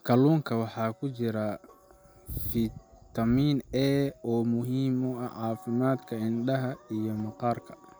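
No technical faults can be heard anywhere in this speech recording; the signal holds steady throughout with nothing in it that needs flagging.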